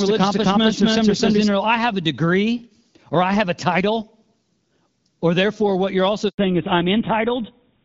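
From the very start until 1.48 s, the speech carries a doubled audio track. A second, full-band copy runs about a third of a second behind the first and at roughly the same level, most likely because the signal is being captured twice through paths of different latency. It sounds like a stuttering, overlapping echo with no room decay. The doubling is already present at 0 s and stops abruptly at 1.48 s.

At 6.28 s a handover gap cuts in. While the call switches from one network to another, no speech frames arrive for 100 ms. The voice dies away within a few tens of milliseconds and is followed by dead silence until the new link picks up at 6.38 s. Whatever was said in that tenth of a second is gone.

From 6.38 s to the end, the call has fallen back to narrowband. Until then it was carried by the AMR wideband (HD Voice) codec at a rate that fits 12.65 kbit/s, and the speech was clear with only light coding damage. 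After the handover the link drops to an older codec, most consistent with GSM full rate. Nothing above 4 kHz survives, so the voice loses its crispness and sibilance and sounds duller, boxier and rougher.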